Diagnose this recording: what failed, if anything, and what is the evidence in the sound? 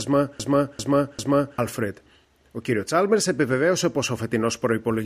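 A player or stream buffer likely stalled, replaying its last fragment: a broken-record loop repeats one 0.40 s piece back to back from 0.00 to 1.58 s, already running at the start, losing the intended audio.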